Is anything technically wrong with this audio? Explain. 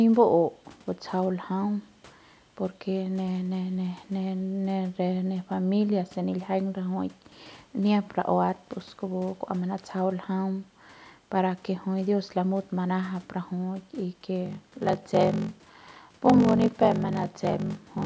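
Yes. From 14.44 s to the end of the clip, the speech shows a block size mismatch (padded). One stage delivers shorter blocks than the next reads, so each block, which fits a 1024-sample read, ends in a stretch of zeros. These regular gaps produce a buzz at 46.9 Hz, and the speech slows to about 0.86 times its normal speed. Random dropouts would be irregular. A truncating mismatch would speed the audio up. The call-style band limit, with nothing above 8 kHz, is normal microphone processing.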